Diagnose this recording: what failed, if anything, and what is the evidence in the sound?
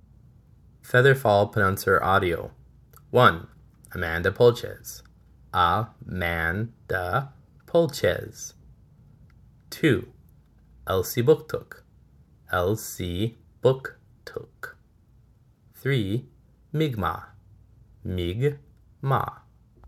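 Nothing failed; no stage of the chain shows audible trouble.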